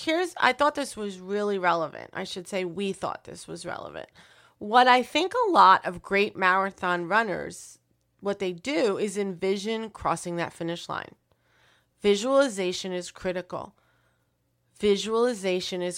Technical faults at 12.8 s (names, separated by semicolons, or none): none